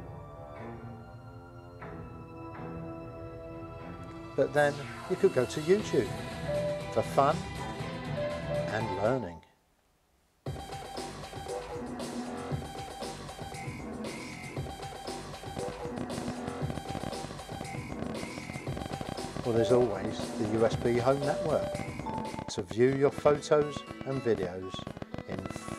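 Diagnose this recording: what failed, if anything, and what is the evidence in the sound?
From 15.57 s to 25.75 s a train of clicks ticks over the sound, 12.2 per second at an uneven pace, around 150 in all, standing about 10 dB above the audio. Likely an analogue wiring fault: interference from nearby equipment, a bad connection or a power supply injecting repeated, similar pulses.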